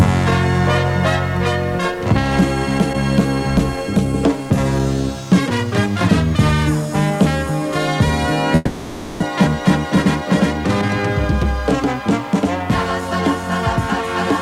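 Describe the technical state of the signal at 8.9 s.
A long network dropout spans 8.55 to 9.24 s, likely from lost packets. The last sound stretches into a fading buzz or hiss, seen as flat, smeared spectrogram bands, and about 0.6 s is missing.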